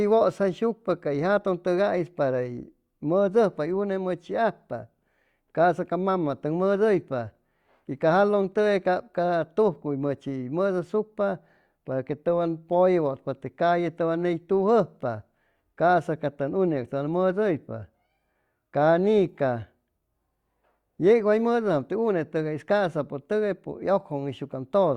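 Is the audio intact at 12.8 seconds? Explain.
Yes, at 12.8 seconds the audio is intact, with no audible dropout, click, distortion or other fault at that moment.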